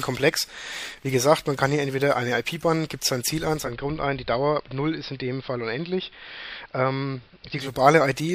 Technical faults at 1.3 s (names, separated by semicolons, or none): none